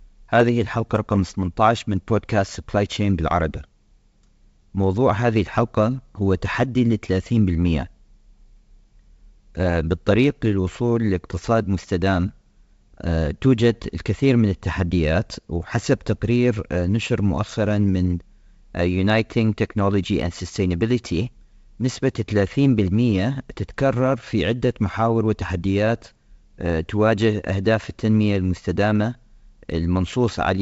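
A speech clip carried over G.722 wideband coding has a single burst of bit errors on the ADPCM link at 16.89 s, where a very low error rate corrupts the decoder's step size and predictor, producing a brief pop with a rough, short-lived level disturbance.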